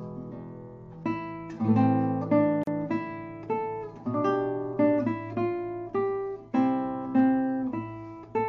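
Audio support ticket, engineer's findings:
Gap at a join of encoded pieces, 2.63 s to 2.67 s: about 38 ms dropout in continuous sound, then it picks up where it left off. Looks like separately encoded chunks spliced without trimming encoder delay and last-frame padding, so that silence stayed in.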